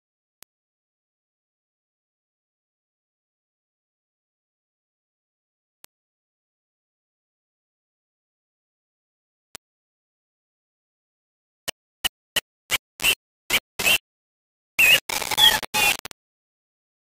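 From start to finish the audio carries heavy, grainy distortion that rises and falls with the sound. It is most likely low bit depth without dither. The waveform appears to have been rounded to very few levels, which fits a 3-bit signal. Because no dither was added, the rounding error tracks the signal instead of forming a steady hiss. The distortion sits close to the level of the sound itself. Quiet sounds turn gritty.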